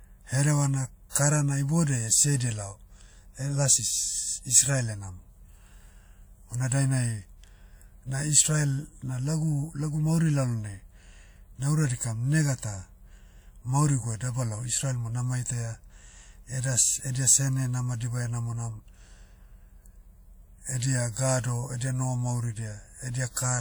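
Pre-echo appears from 1.10 to 1.15 s: a transform codec spread quantisation noise across a block containing a sharp speech attack, so about 53 ms of hiss leaks into the quiet moment before the onset, leaving the attack itself softened and smeared.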